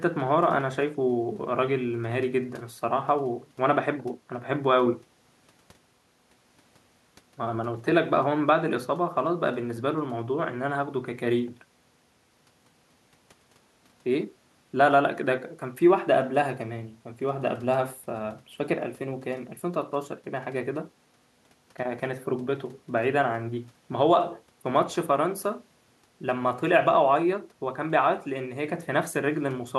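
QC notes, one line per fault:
No faults found; the speech sits well clear of the room noise, which is about 40 dB below it.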